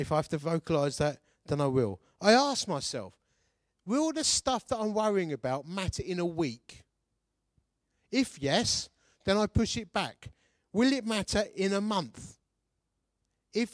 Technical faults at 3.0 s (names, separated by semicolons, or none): none